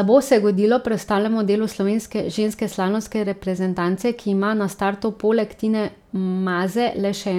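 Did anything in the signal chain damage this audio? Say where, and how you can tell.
No, nothing in the signal chain damaged this audio.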